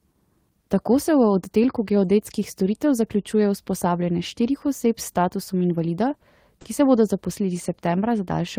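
At 6.61 s a sound in the speech hangs on for about 40 ms with a slight buzz or dip. It's a short stall from a late packet: the jitter buffer ran dry and the last sound was stretched, then resumed with nothing lost.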